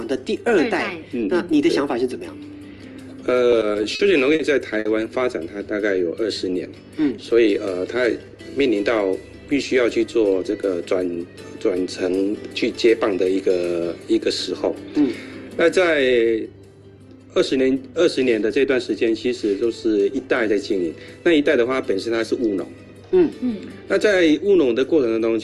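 Repeated stalls (stutter) run from 3.51 to 4.42 s: late packets empty the jitter buffer six times, and the receiver extends the last sound for gaps up to 40 ms, so the audio drags and catches. A short stall from a late packet at 4.79 to 4.88 s holds one sound about 60 ms too long while the receiver waits, then resumes where it left off. A jitter buffer speed-up at 8.07 to 8.41 s and again at 19.99 to 20.56 s trims tiny pitch-period slices to shed excess delay, running about 11% and 7% fast at unchanged pitch, so those stretches sound hurried.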